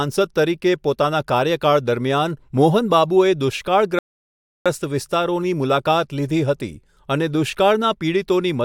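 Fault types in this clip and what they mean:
Rebuffering stall: playback ran dry of downloaded data, so the speech drops to silence at 3.99 s for about 0.67 s, then resumes exactly where it stopped.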